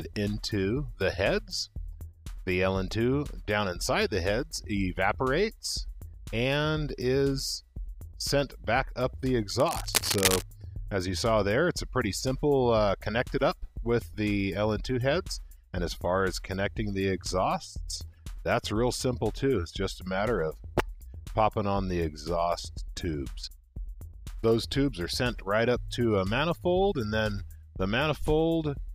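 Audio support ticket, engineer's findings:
Cable scratch noise, 9.60 to 10.42 s. Dense, irregular scratching and rustling bursts over the sound for roughly 0.8 s, at about the same level as the programme itself. Likely a worn cable, connector or control being moved: contact resistance fluctuating rapidly, modulating the signal path and injecting broadband crackle. Check and reseat connectors; replace the suspect lead or clean the control.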